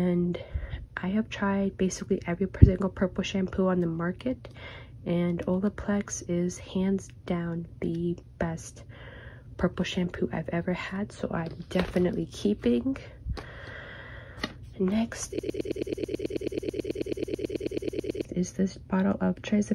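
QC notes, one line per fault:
15.39–18.25 s: broken-record loop, a 109 ms fragment repeats exactly 26 times; likely a stalled stream resending its last fragment, so the intended audio is lost.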